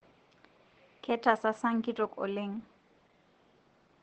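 Opus voice compression runs through the whole speech clip. Nothing is heard above 8.2 kHz, so the sound is muffled. The SILK coder models the voice coarsely. That makes it hoarse and slightly robotic. This fits a low bitrate near 12 kbps.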